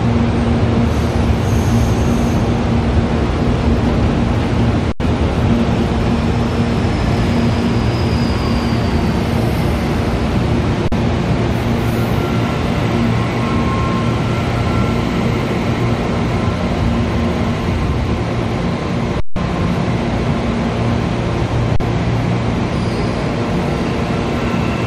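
The output buffer repeatedly ran dry, an underrun with held sample: the converter froze on its last value, so the audio stops flat at 4.92 s (80 ms), 10.88 s (40 ms), 19.2 s (160 ms) and 21.76 s (40 ms), then resumes where it left off with a soft edge.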